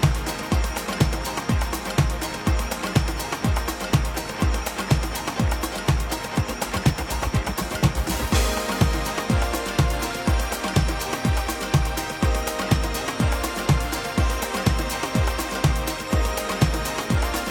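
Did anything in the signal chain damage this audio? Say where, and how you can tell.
No, I can't hear damage from any stage of the chain anywhere in this audio.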